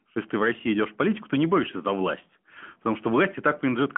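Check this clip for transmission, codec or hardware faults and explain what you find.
No faults turn up anywhere in this speech.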